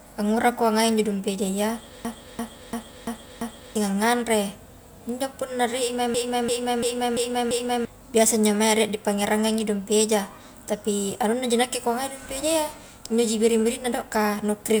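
From 2.05 to 3.76 s, and again from 6.14 s after "punna rie i mai" until "biasa injo" at 7.85 s, a system hang loop repeats one 341 ms piece of speech five times, fitting a 16384-sample ring buffer cycling while the system froze. Unlike a dropout, the stutter repeats identical audio at 2.93 Hz instead of going silent, and about one and a half seconds of speech are lost each time.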